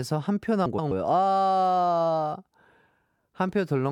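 From 0.66 to 0.92 s, frames out of order: two adjacent 128 ms blocks play swapped, giving a garbled flutter, though no time is lost.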